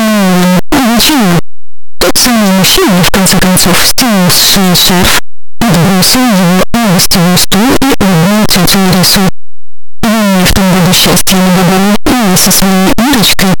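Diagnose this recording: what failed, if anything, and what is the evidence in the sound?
The sample-format conversion stage failed. From start to finish the sound is harsh, loud distortion. Quiet stretches are as loud as everything else. The likely cause is signed and unsigned mixed up on 8-bit samples. The flipped top bit turns every zero crossing into a full-range jump.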